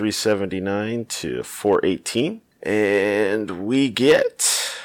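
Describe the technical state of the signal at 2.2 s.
At 2.2 s the speech hits hard clipping, from 2.17 to 2.21 s. For those 35 ms the signal overshoots the stage's maximum by about 2 dB, so the peaks are sheared flat. The flattened tops add high-frequency harmonics, heard as a brief crackle.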